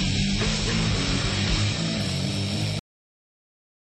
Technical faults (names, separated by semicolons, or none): adaptive stream starting at a low bitrate; cut-off end